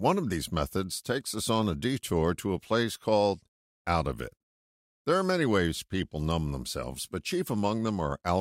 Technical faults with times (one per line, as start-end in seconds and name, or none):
none